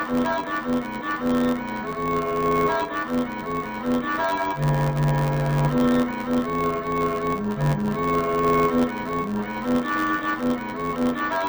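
From start to finish the audio suffers from interleaved audio read as planar. Each short block of alternating left and right samples is split in half, with the first half taken as left and the second as right, so both channels play at half speed while the overall pace holds. With blocks of 10.88 ms, the result sounds dull and robotic, buzzing at 91.9 Hz with no clear octave drop. A spectrogram shows comb-like harmonics spaced 91.9 Hz apart, and the waveform shows regular seams every 10.88 ms.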